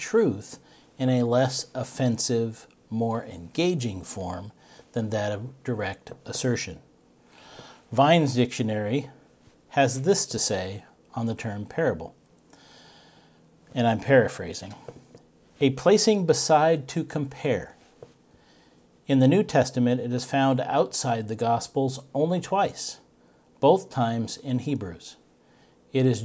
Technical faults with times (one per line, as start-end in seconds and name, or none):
none